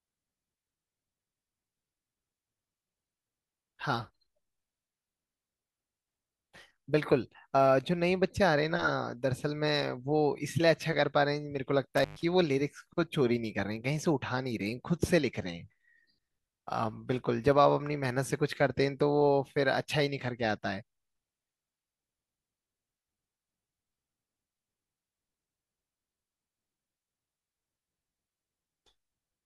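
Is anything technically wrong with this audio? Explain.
Yes. From 11.97 to 12.24 s, an intermittent contact briefly opens the line. The speech cuts out for 122 ms, with crackle at each edge and faint hiss between.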